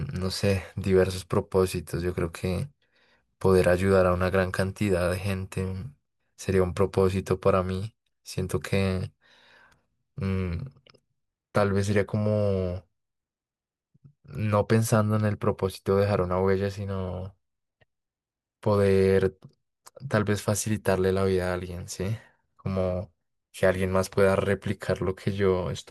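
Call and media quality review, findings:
No audible faults were found in the speech signal; level, continuity and timing stay stable across the whole recording.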